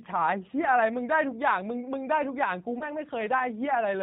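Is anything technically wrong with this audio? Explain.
Yes, there are two faults.

Throughout, the speech passes through the G.729 codec, with the plainly audible damage of a low-rate CELP coder that fits about 8 kbit/s. The voice is rebuilt from a vocal tract filter, pitch predictor and a few pulses per frame, nothing above 4 kHz survives, and it sounds rough and synthetic.

From 2.79 to 2.84 s there is VoIP packet loss concealed by the speech codec, consistent with one lost 20 ms packet. The decoder extends its last pitch and filter at falling gain, so the voice is briefly stretched into a fading buzzy tone or coloured noise, and because each frame builds on the previous one it stays weak or distorted for a while after audio resumes.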